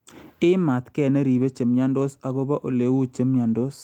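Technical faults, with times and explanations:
1.37–1.43 s, lost packet rebuilt from error correction: about 40 ms of speech turns rougher and noisier without dropping out, which fits two lost packets whose low-bitrate copies in the following packets were decoded in their place, covering the gap at reduced fidelity.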